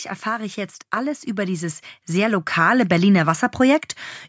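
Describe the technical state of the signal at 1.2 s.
At 1.2 s the signal sits inside an automatic gain rise that runs from 0.23 to 3.54 s. The gain control judged the input too quiet and kept pushing its gain upward, by about 9 dB over that span. The change is slow, not a jump. The speech and the background noise swell together, so the whole sound seems to creep closer. The call microphone path's band limit, with nothing above 8 kHz, still applies.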